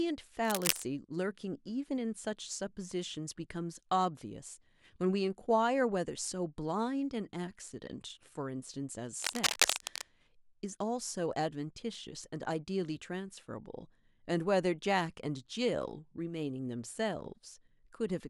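A worn cable or connector was likely being moved, its contact resistance jumping erratically, which is cable scratch noise. From 0.45 to 0.82 s and again from 9.19 to 10.02 s, dense, uneven scratching bursts sit over the speech at roughly its own loudness.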